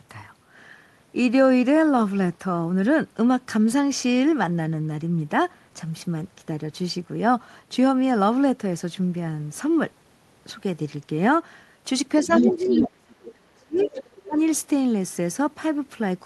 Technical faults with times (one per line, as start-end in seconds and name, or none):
12.22-13.89 speech suppressed in double talk
12.24-12.83 other side's voice leaking through
13.30-13.34 other side's voice leaking through
13.77-14.16 other side's voice leaking through
14.24-14.38 speech suppressed in double talk